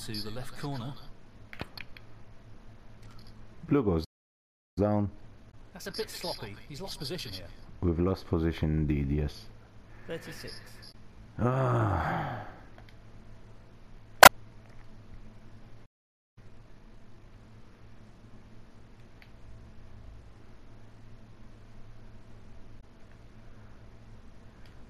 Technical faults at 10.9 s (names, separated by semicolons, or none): damaged data in a compressed stream